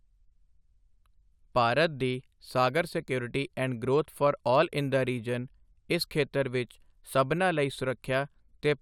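Nothing to flag here: the speech comes across without any technical problems worth pointing to.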